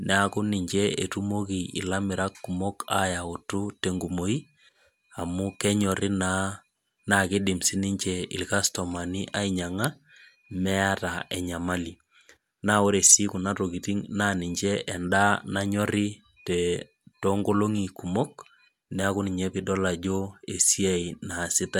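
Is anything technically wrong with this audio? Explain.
Yes. At 14.60 s, just after "si kuna tokiting naa", there is a bit error spike: a single flipped bit in memory or on a digital link throws one sample off by a power of two, peaking near about -26 dBFS, before it snaps back. The result is one sharp, broadband tick that has nothing to do with the speech.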